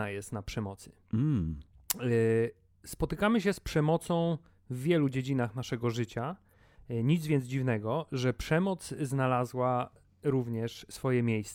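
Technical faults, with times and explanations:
No technical faults are audible in the speech recording, and the signal stays continuous throughout.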